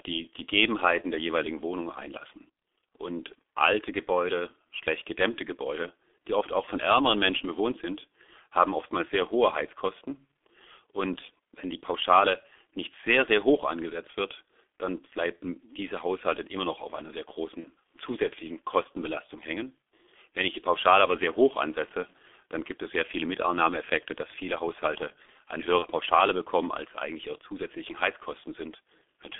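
The whole clip runs through the G.723.1 codec at 6.3 kbit/s, squeezed into a line band of roughly 250 Hz to 3.5 kHz. Its slow-updating voice model and 30 ms frames leave the speech heavily muffled and hoarse, with consonants smeared together.

At 17.60 s, right after "noch auf einer sehr", there's VoIP packet loss concealed by the speech codec. Over about 75 ms, one lost 30 ms frame gets stretched into a fading, extrapolated sound, with the voice staying weak or distorted briefly while the decoder recovers. The same thing happens again at 25.79 s.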